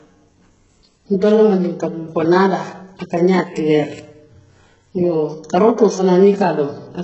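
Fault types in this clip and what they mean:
HE-AAC compression: The speech across the whole clip has no content above about 7.7 kHz, and what sits below that is heavily degraded, with the treble region sounding synthetic rather than natural. This is likely HE-AAC at a very low bitrate, which fits roughly 8 kbps, where only the lower spectrum is actually coded and the upper band is rebuilt by copying lower bands upward under a coarse envelope, so harmonics there no longer match the originals.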